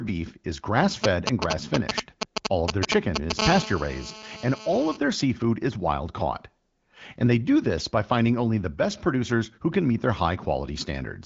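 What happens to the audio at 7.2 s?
Nothing goes wrong at 7.2 s: the speech there is intact, carried through the AMR wideband (HD Voice) path like the surrounding audio.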